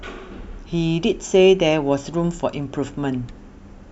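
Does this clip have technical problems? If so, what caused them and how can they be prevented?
No, nothing here sounds like a technical problem, so there's no cause to track down and nothing that needs preventing.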